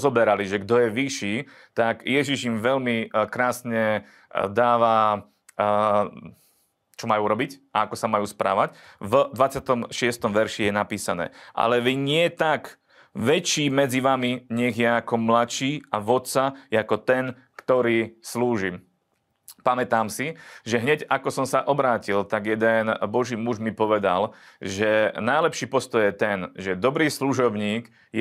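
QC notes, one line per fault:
No faults found.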